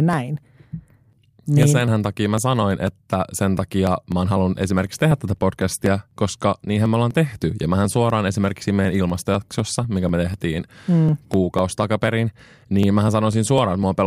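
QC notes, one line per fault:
0.13–13.83 s, periodic USB or driver dropouts: a short tick recurs every 0.249 s, roughly four per second, across the speech and stays silent in pauses. Each time, around a millisecond of audio is skipped rather than replaced with silence, so the waveform jumps abruptly to a later point. That discontinuity produces the click. The fixed spacing points to a background task stalling the USB bus or audio driver on a regular schedule.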